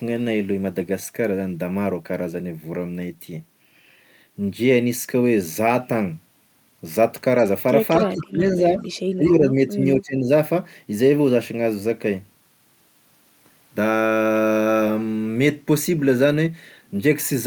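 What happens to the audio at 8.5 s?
The speech is suppressed in double talk from 7.97 to 8.8 s. It dips by roughly 20 dB, likely an echo canceller muting overlapping talk.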